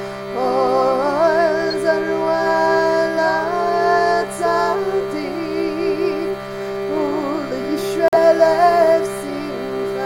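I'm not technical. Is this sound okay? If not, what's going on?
No. At 1.70 to 1.74 seconds there's a corrupt frame decoded: a damaged chunk of data was played anyway, producing a brief chirp or burst of noise rather than silence. At 8.08 to 8.16 seconds a corrupt frame muted leaves a sudden gap of silence, likely about three rejected chunks, with nothing shifted in time.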